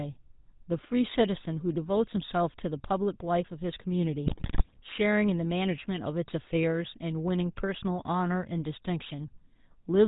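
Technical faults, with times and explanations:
throughout: GSM full-rate codec. The speech is band-limited to 4 kHz and has a buzzy, gravelly roughness, which fits 13 kbit/s GSM full rate. It models the vocal tract and excites it with regularly spaced pulses that keep only every third excitation sample, so fine detail is lost.
4.26 to 4.81 s: GSM bit errors. For about half a second the speech breaks into squawks, pops and gargling, consistent with a few percent of bits flipped across roughly 27 frames. Corrupted filter, pitch and gain values distort the spectrum and make the level jump frame by frame.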